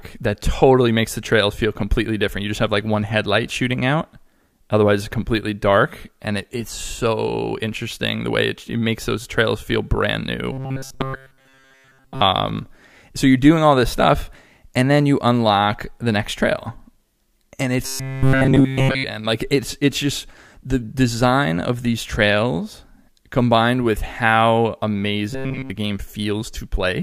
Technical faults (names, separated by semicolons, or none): robotic sound from repeated short buffers